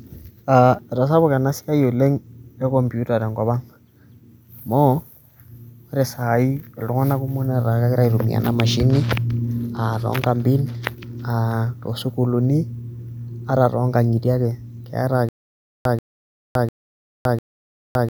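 At 15.29 s the speech breaks into a stutter with silent gaps that runs to the end. A burst of about 135 ms plays, then about 565 ms of digital silence follows. The same burst returns every 700 ms, four times over. The likely cause is a stalled player or stream that replayed its last fragment at each retry and then ran dry. Whatever should have played after 15.29 s is lost.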